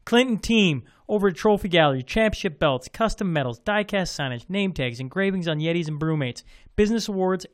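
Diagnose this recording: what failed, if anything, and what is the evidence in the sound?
Nothing failed in this recording, and no stage of the chain leaves any audible evidence of a fault.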